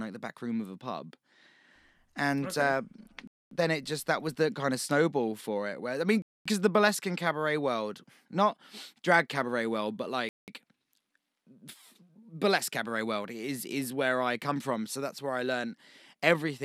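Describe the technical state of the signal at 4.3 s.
At 4.3 s the speech comes through intact, with no dropout, click, distortion or other audible fault at that point.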